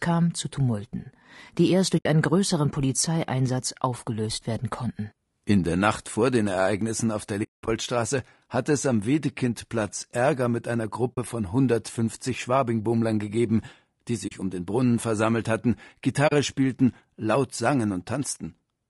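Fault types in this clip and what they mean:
Low-delay AAC compression: The speech sounds rough and grainy throughout, with noise filling the gaps between harmonics and a thin, artificial top band. This is likely AAC-ELD at around 32 kbps. Its short frames resolve pitch poorly at that rate.
AAC frame loss with muting: The speech drops into soft-edged silences at 1.98, 7.43, 11.15, 14.27 and 16.27 s. Lost frames were zeroed and faded through the overlapping windows. The longest gap runs about 200 ms near 7.4 s.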